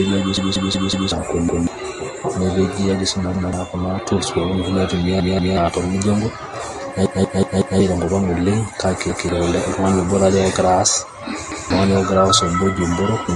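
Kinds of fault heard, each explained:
MP3 compression: Likely a starved lossy encoder cutting everything above 11.3 kHz and dropping weak detail, leaving the speech dull, watery and swirly throughout.
Repeated buffer: Audio arrived late, so the player replayed its last 186 ms chunk, which fits an 8192-sample buffer, causing seven hard-edged stutters, the two longest each repeating four extra times.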